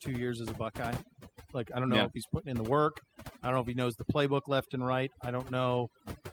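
Overdone noise removal runs through the speech. Bands near the noise estimate are pushed nearly silent, leaving twinkling specks, unlike steady muffling from a low-pass filter. Clock drift between sender and receiver also persists throughout: the sender's clock runs fast by roughly 4 percent, so the receiver's buffer keeps overfilling, unlike random network jitter. From 0.45 to 6.22 s, repeated timing corrections trim short pieces to absorb the 104 percent rate; the edits are small and unevenly spaced, all cuts and never repeats.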